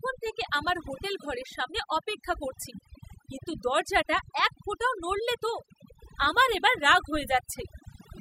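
Overdone noise removal runs through the whole speech clip. A noise reduction stage was set too hard. It cuts individual frequency bands whenever they sit near its noise estimate. Pauses drop to near silence with twinkling specks. Quiet parts of the voice are cut along with the noise.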